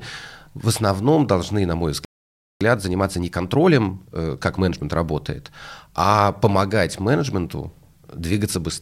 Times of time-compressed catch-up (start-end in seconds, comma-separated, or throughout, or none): 2.61-4.83